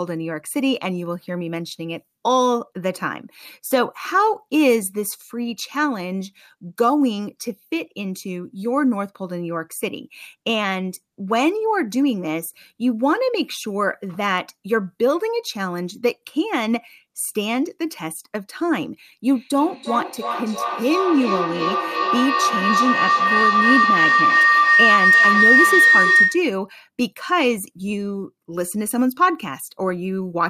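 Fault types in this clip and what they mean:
Feedback howl: from 19.29 to 26.59 s, a microphone-to-loudspeaker loop gains level each pass, building a tone around 2 kHz, with repeats about 300 ms apart, peaking about 5 dB above speech.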